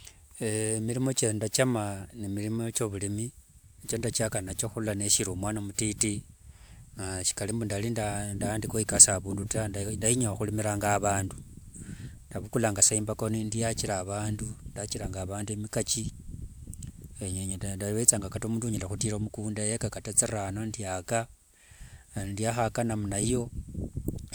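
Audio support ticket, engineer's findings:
Reviewed the full speech recording and found no technical faults.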